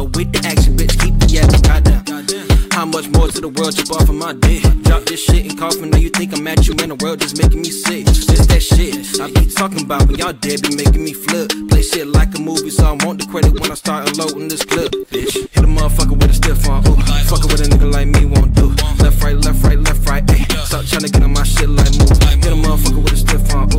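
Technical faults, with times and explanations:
No technical faults can be heard anywhere in the clip. The audio carries on without any interruption or audible damage.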